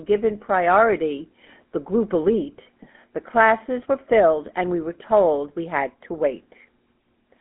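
Throughout, the speech carries GSM full-rate codec damage: pulse-driven excitation gives a buzzy, gravelly roughness, unlike clean band-limiting, with nothing above 3.7 kHz, fitting a 13 kbps coder.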